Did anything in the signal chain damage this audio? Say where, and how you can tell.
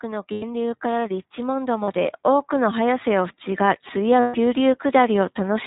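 Yes. Throughout, the speech sounds muffled and band-limited, with nothing above 4 kHz, and carries a plainly audible rough, slightly synthetic grain. That places the damage at the codec stage. The iLBC codec codes each 20 ms frame's excitation independently, and this character fits its 15.2 kbps mode.

At 0.32 to 0.44 s, 1.84 to 1.90 s and 4.20 to 4.36 s, the speech briefly turns into a held, buzzy, vowel-like tone lasting about 100, 40 and 140 ms, then snaps back cleanly. These are lost iLBC frames from the network stage. The decoder filled each gap by repeating the last pitch cycle mixed with noise, and because every frame stands alone, it recovered immediately.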